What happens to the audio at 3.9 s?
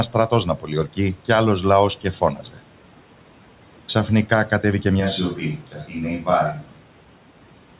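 Nothing goes wrong at 3.9 s: the speech carries on intact, with only the room noise underneath and the narrow, telephone-like band of the call path, which has nothing above 4 kHz.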